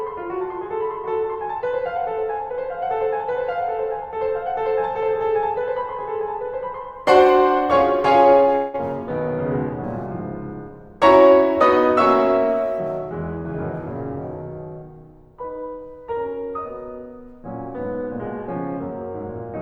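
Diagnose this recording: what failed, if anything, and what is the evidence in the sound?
The network stage failed: a long network dropout in the music between 8.55 and 8.76 s. For about 0.18 s the receiver fills the gap by stretching the last sound into a buzzy or hissy, fading continuation, with no stretch of true silence. When the music resumes, roughly 0.18 s of it is simply missing. The likely cause is a burst of lost packets with concealment covering the hole. On a spectrogram the harmonics smear into a blurred, decaying band before the music resumes abruptly, and the waveform shows a dwindling repetitive envelope.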